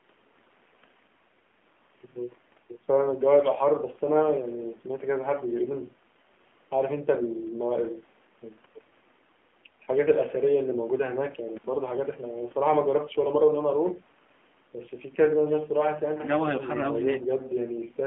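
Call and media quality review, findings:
AMR narrowband mobile codec, whole clip. Speech squeezed into roughly 200 Hz to 3.4 kHz, with plainly audible buzzy, synthetic texture from the vocal-tract model running short on pulses. The coarseness fits a low mode like 7.4 kbps. Call mic high-pass trims the bass as expected.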